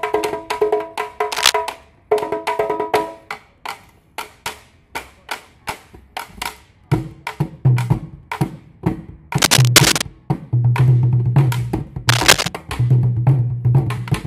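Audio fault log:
1.32–1.53 s, 9.38–10.02 s and 12.08–12.49 s: cable scratch noise. Dense, ragged bursts of scratching and rustling sit on top of the sound. The first burst is roughly as loud as the sound itself. The later two are a little louder and last longer. The likely cause is a worn cable, connector or control being moved. Its contact resistance jumps about rapidly, and each jump adds a spike of noise.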